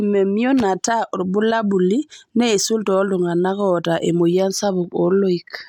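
No technical faults can be heard anywhere in the speech recording. There is nothing in it that calls for a timed description.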